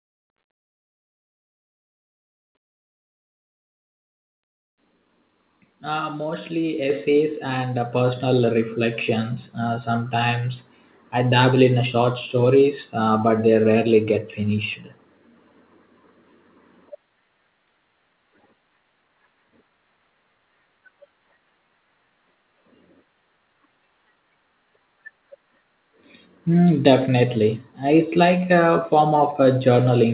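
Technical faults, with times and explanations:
6.9 s and 7.92 s: microphone volume stepped up. The input gain jumps in two abrupt steps, about 5 dB and then about 4 dB a second later, and each new level holds. Voice and background noise rise together, so the mic gain changed, not the speaker's effort or distance. A talker leaning in would lift the voice but not the room noise, and a compressor or AGC would swell smoothly rather than click straight to a louder level.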